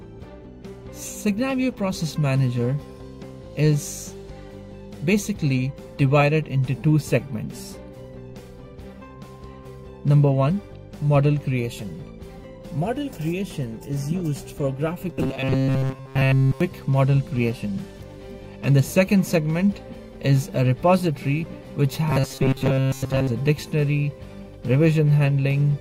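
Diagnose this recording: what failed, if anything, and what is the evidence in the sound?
Two stretches, 15.13 to 16.61 s and 22.10 to 23.27 s, turn into a rigid metallic buzz locked at 133 Hz. That's robotic sound from repeated short buffers, most likely at the driver or buffer stage: audio arrives too seldom, so a block of roughly 7.5 ms gets replayed over and over while the real material is skipped. Somewhere around 70% of each stretch is repeats, and the repeat rate imposes that fixed pitch.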